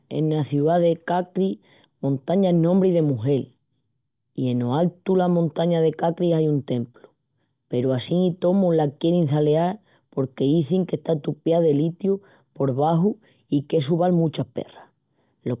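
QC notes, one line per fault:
No faults heard in this clip.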